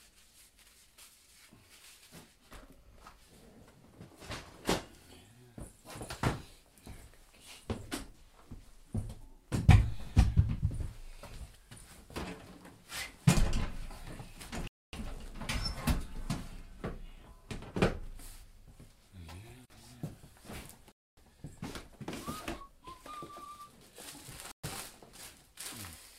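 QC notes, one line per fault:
14.68–14.93 s, 20.92–21.17 s and 24.52–24.64 s: Bluetooth stall. The sound drops to dead silence three times, for about a quarter of a second in the first two gaps and about an eighth of a second in the last. The sound then resumes. This is likely a wireless link held up by interference, so the receiver's buffer ran empty and playback waited for resent packets.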